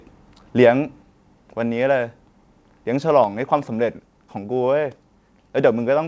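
At 1.02 s the speech drops abruptly by about 4 dB, and at 3.24 s it drops by about 3 dB. This is likely a microphone volume stepped down by the call software's input-gain control. The audio stops above 8 kHz, as expected on a G.722 call path.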